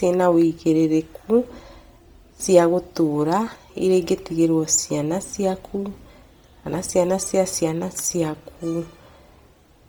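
From start to finish, the speech has a breathy, grainy upper range, with hiss-like noise where fine high detail should be, though the band still reaches 20.2 kHz. The likely cause is heavy Bluetooth LC3 compression, zeroing upper spectrum and noise-filling it, which fits about 32 kbps with 10 ms frames.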